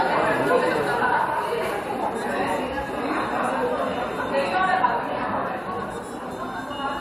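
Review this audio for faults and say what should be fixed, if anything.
Nothing stood out on listening to this sound, so there is nothing here that needs fixing.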